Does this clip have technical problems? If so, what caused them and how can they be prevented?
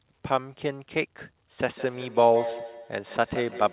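Yes. From 1.75 s to the end, feedback echo between two devices repeats the speech about every 150 ms, peaking at about -11 dB relative to it. Unlike room reverberation, these are distinct repeats at a fixed interval: a second device in the room on the same call plays the audio back into the microphone, and neither echo canceller can remove the other device's output. To prevent it, join the call from one device per room, or mute the microphone and speaker on the extra device.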